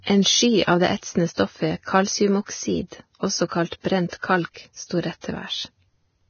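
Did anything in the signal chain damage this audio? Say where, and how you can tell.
Yes, at the codec stage: the speech sounds hissy and grainy throughout, and a spectrogram shows a hard ceiling at 6.6 kHz, likely from heavy Vorbis compression near 18 kbps coarsely quantising the treble into noise.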